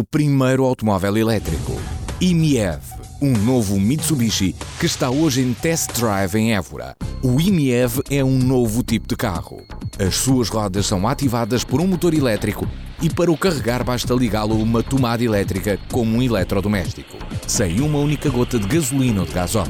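No technical faults are audible.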